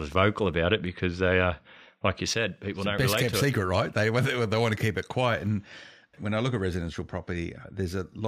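A speech recording in which one stereo channel most likely drops out at 2.34 s and stays lost to the end of the clip. When the two channels are summed to mono, the sound they share is then carried by one side only, so from 2.34 s onward the speech falls abruptly by about 6 dB. The step is sudden rather than a gradual fade, and the lower level holds steady for the remaining six seconds.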